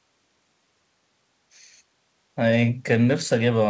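Speech over a WebRTC call path, with nothing above 8 kHz, consistent with G.722 coding, and no faults found.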